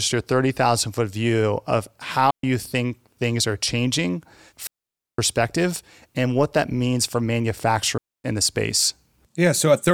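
Digital wireless dropouts hit after "foot view of" (2.31–2.44 s), after "things are changing" (4.67–5.19 s) and before "in the space" (7.98–8.24 s): the receiver lost data and muted. Unlike analog dropouts, these are clean near-silent holes with no surrounding noise burst.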